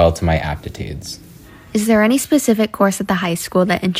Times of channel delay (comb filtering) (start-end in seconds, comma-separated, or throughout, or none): none